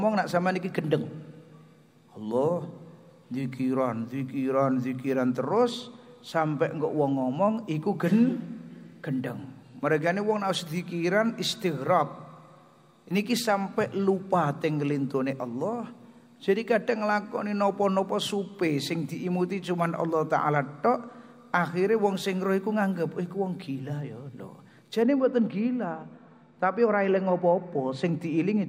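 From 25.02 s to the end at 28.69 s, de-emphasis has been applied wrongly: a treble-cut filter meant to reverse pre-emphasis acted on a signal that never carried that boost, or cut it a second time. The high end therefore falls away in a smooth, steady slope, reaching about 13 dB down at 10 kHz relative to 1 kHz. The final seconds of sound turn dull and muffled, losing brightness and crisp detail.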